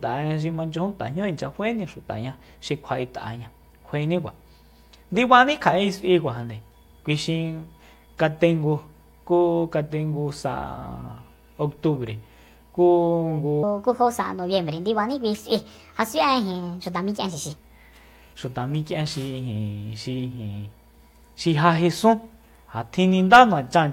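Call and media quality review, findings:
Section at the wrong speed, 13.63 to 17.56 s: speech abruptly hurried and raised, about five semitones up, running at 1.39x. Likely a playback or resampling clock mismatch on that segment. Spectrogram: harmonics and formants shift upward together, with compressed syllable spacing.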